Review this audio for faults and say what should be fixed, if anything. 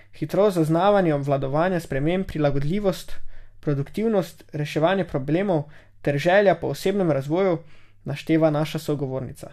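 No faults heard in the speech recording, so nothing needs fixing.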